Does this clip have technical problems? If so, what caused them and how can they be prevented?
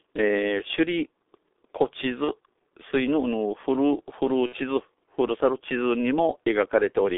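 Yes. The whole clip passed through the G.723.1 codec at a very low rate, which fits about 6 kbit/s. It keeps only 300 Hz to 3.6 kHz and rebuilds speech from a slowly updated model, so the voice sounds muffled and hoarse, with smeared consonants. Preventing this means using a wideband codec such as Opus at a higher bitrate.

VoIP packet loss concealed by the speech codec occurs at 2.24–2.33 s and 4.46–4.56 s. The losses fit about 30 ms and 60 ms of missing audio. The decoder filled each gap by repeating its last pitch and filter at falling gain, giving a brief, fading smear that lingers after the packets return. A jitter buffer, forward error correction and a less congested network path would prevent it.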